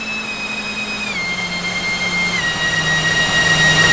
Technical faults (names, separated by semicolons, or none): wrong sample rate